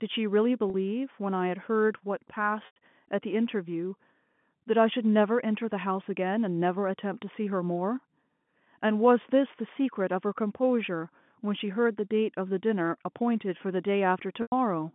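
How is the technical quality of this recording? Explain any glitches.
Three short dropouts interrupt the speech, which comes over a G.711 telephone line limited to roughly 150 Hz to 3.5 kHz.

Packet loss with pitch repetition occurs at 0.70 to 0.74 s, 2.66 to 2.76 s and 14.42 to 14.52 s. Packets went missing, and the receiver looped the last pitch period to fill each gap. The 40 ms loss sounds like a briefly held, buzzy tone. The 100 ms losses fade toward silence before the speech cross-fades back.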